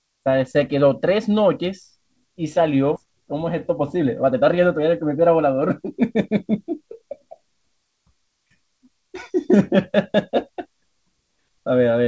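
At 2.96 s the speech lurches forward with no gap, about a second of it gone: a skip ahead, where the jitter buffer discarded queued audio to shed built-up delay. From 3.03 to 6.30 s the speech sounds hurried at unchanged pitch, running about 113% speed. This is jitter buffer speed-up, trimming pitch periods repeatedly until nearly half a second was removed.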